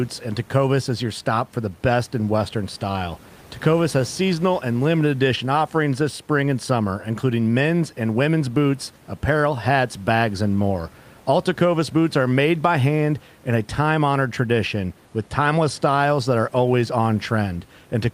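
No faults are present in this speech; the only background is the room's own noise, sitting about 30 dB below the voice.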